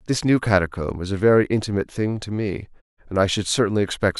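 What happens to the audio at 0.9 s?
Nothing goes wrong at 0.9 s; the speech carries on intact through that moment, with no dropout, click or distortion.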